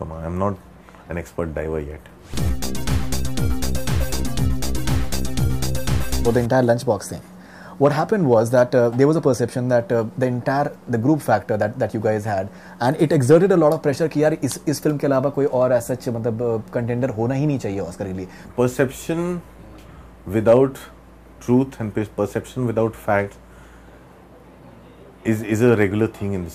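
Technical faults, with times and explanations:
No technical faults are heard anywhere in the clip.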